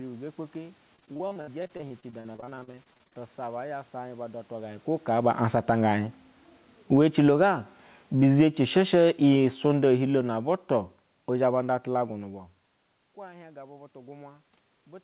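From 0.96 to 3.17 s, repeated packet loss (robotic sound) breaks up the speech. Dozens of short holes, the longest 57 ms, are patched by repeating the preceding sound, leaving it choppy with pieces missing. A spectrogram shows smeared, stuttering harmonic bands, and the waveform shows repeated, copied cycles across about a third of that span.

Automatic gain falling starts at 6.78 s. The control lowers the level by about 10 dB until 7.47 s, so the speech and the room noise sink together. The waveform envelope tapers smoothly.

Overlapping that, automatic gain rising lifts the level by about 8 dB between 7.39 and 7.88 s. Voice and background swell together, and the waveform envelope widens within half a second.

A second, slower automatic gain falling runs from 8.07 to 11.85 s. It pulls everything down by about 10 dB, and the spectrogram darkens evenly across the band, which ends at 4 kHz on this call path.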